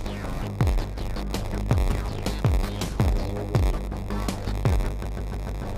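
A block size mismatch (padded) runs throughout, with a steady 93.8 Hz buzz and playback at 0.938 speed but unchanged timbre, which fits a 512-sample read buffer and rules out a sample-rate error. From 5.03 to 5.62 s, repeated frames replay the same 139 ms chunk four extra times, adding 557 ms. The sound stutters rather than skipping, so nothing is lost as it would be in a dropout.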